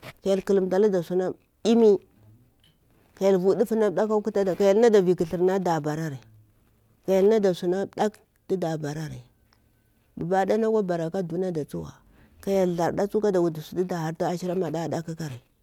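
Nothing in the speech stood out as a technical problem on listening.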